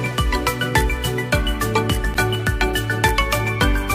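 At 2.14 s the audio drops out to dead digital silence for about 10.7 ms, then snaps straight back, and again at 3.09 s for about 2.7 ms. That's a block of digital silence: a chunk of samples came out as zeros, which fits a 512-sample buffer the first time and a 128-sample block the second. With no fade on either side, the first comes across as a small pop with a brief dip and the second as a sharp tick.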